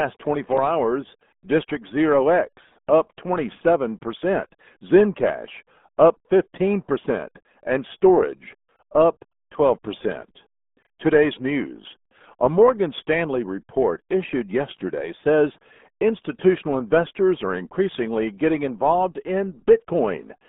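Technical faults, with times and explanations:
Throughout: RealAudio 14.4 codec. The speech is squeezed into a narrow band from 200 Hz to 3.6 kHz, with nothing above 3.8 kHz. Heavy coding damage leaves it muffled and gargly, which fits an 8 kbit/s codec built for dial-up modems.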